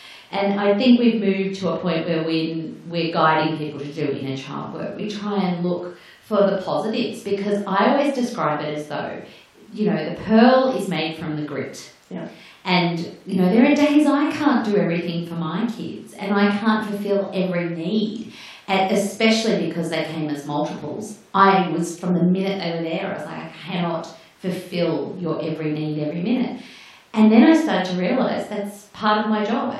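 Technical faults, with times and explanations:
No technical faults can be heard in this speech recording. Nothing in it calls for a time or an explanation.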